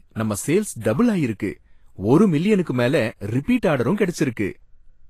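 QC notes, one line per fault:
throughout: Vorbis compression, likely at a low bitrate around 32 kbps; the coarse treble quantisation leaves the speech plainly hissy and grainy, with roughened tone and blurred consonant attacks, and nothing is left above about 14.2 kHz because the encoder lowered its cut-off.
2.63–2.67 s: pre-echo; a sharp attack landed late in a transform block, so quantisation noise sized for the loud onset spread back across the quiet stretch before it, giving a short hiss about 36 ms ahead of the attack and a softened, smeared onset.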